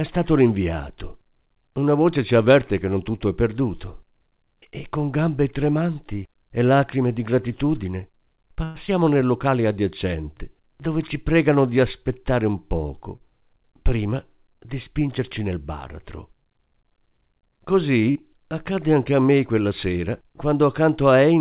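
A speech recording that came through a call link, with the band stopping at 4 kHz, which fits G.711 mu-law at 64 kbps. Right after "e lacrime di gratitudine", from 8.64 to 8.78 s, there's a call audio freeze: the last sound stretches into a fading buzz for about 106 ms, then the speech resumes where it left off with nothing lost. That's likely packets held up in transit draining the jitter buffer. Short concealed packet loss shows up three times as brief smears where the receiver extrapolated over missing audio: at 8.87 to 8.90 s, at 13.16 to 13.23 s between "pregano di aspettare un" and "prima di", and at 18.11 to 18.18 s just before "accadde anche a me". Each of those dropped about 40 ms of real signal. Just after the first of those, from 9.04 to 9.28 s, there's a jitter buffer slow-down. The receiver repeated pitch periods to rebuild its reserve, so the speech drags at about 87% speed with the pitch unchanged, adding about 36 ms.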